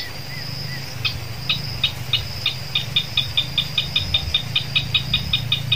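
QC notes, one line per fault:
Nothing stood out on listening to this audio.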